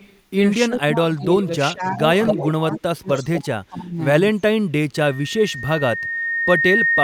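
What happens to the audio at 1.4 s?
At 1.4 s the speech dips by up to about 20 dB, in patches totalling about 0.7 s between 0.67 and 1.97 s. This is likely speech suppressed in double talk, as the echo canceller ducks its own talker while the far side speaks. From 1.21 to 1.46 s an echo leak adds a faint copy of the voice, delayed 255 ms and about 20 dB below the speech. Uncancelled loudspeaker pickup is the likely cause.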